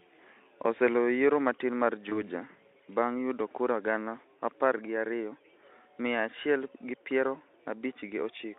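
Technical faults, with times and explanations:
2.09–2.24 s, VoIP packet loss concealed by the speech codec: just after "oseloyo yiero matin mar" one 20 ms frame drops. The decoder fills it by stretching its last pitch and filter at falling gain, giving a short smear that lingers about 150 ms.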